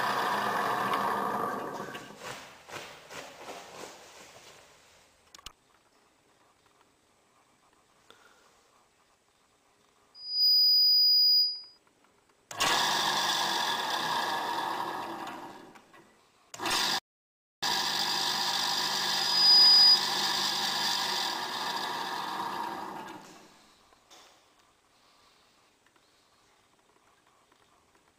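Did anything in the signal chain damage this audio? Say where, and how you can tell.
Yes. An acoustic loop between a loudspeaker and the microphone feeding it went unstable twice, producing loudspeaker feedback squeal. It runs from 10.14 to 11.78 s and again from 19.06 to 20.01 s. Each time a pure tone at 4.9 kHz swells out of the audio within a few tenths of a second, reaching very roughly 10 to 15 dB above the program. Loop gain at that one frequency exceeded unity, so the tone kept feeding itself until the amplifier limited it or the loop was broken.

The second fault is a playback stall. At 16.99 s the audio stops dead in mid-flow and stays silent for 640 ms, resuming at 17.63 s. The gap is silence, which points to the player's output rather than the capture chain. The likely cause is the playback buffer running dry or its thread being blocked, so nothing reached the output until it recovered.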